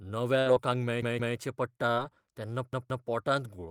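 Packets failed to reach the receiver in time in this speech clip, and the playback device ran dry twice. First, a burst of packet loss runs from 0.39 to 0.47 s. The receiver covers the hole by stretching the last sound for about 60 ms and fading it down, so the sound turns into a held, dimming buzz or hiss. When the signal returns, about 60 ms of the original has been skipped, and the speech jumps ahead rather than picking up where it stopped.

At 1.02 to 1.37 s and again at 2.73 to 3.07 s, a repeated buffer occurs. New audio was not ready when the output needed it, so the device replayed its last block, which lasts about 171 ms and fits an 8192-sample buffer. Each block sounds three times in a row, with a hard seam at every join, and this is heard as a short stutter. Little or no audio appears to be lost, because the stream simply resumes after the repeats.

Between 1.94 and 1.98 s there is short concealed packet loss. 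About 20 ms of audio never arrived, and the decoder filled roughly 26 ms by extending the preceding sound and then blending back into the real signal. This leaves a quick smear or wobble, and a brief consonant in that spot can disappear.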